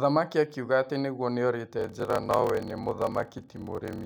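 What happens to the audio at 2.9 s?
At 2.9 s you're in the middle of a block size mismatch (padded) that starts at 1.77 s, just after "akiuga atĩ nĩguo", and runs to the end at 4.06 s. One stage writes shorter blocks than the next reads, which fits 1024-sample blocks, and the leftover space in each block is zero-filled. Those tiny gaps give a 38.3 Hz buzz, and the speech drags to about 0.889 times normal speed while keeping its timbre.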